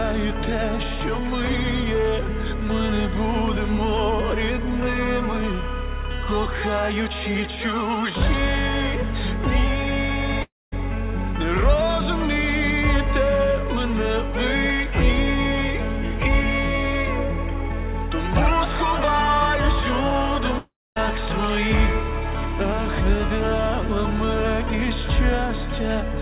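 Long network dropouts at 10.42 to 10.74 s and 20.58 to 20.98 s: the sound smears into a fading buzz, then drops to silence for about 0.22 and 0.25 s before resuming with about 0.3 and 0.38 s missing, likely from packets lost and concealed over a call path band-limited to 4 kHz.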